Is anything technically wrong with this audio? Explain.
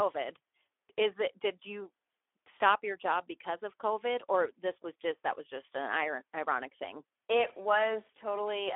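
Yes. Throughout, the speech carries plainly audible Speex codec damage: a CELP coder starved of excitation bits, consistent with roughly 11 kbps, leaves it hoarse and noisy within a 300 Hz to 3.5 kHz band, empty above 3.8 kHz. That grain sets it apart from mere band-limiting.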